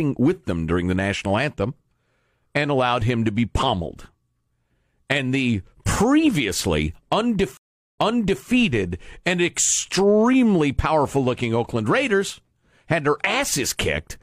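At 7.57 s the speech drops out in a stream reconnect. The connection broke, the player fell silent for 400 ms, then reconnected and started a new decoder partway through the stream. When the sound returns, ending the disturbance at 8.46 s, it picks up about 0.49 s earlier than where it stopped, so a short stretch of speech is heard twice. This fits a server resending a burst of recent audio on reconnection.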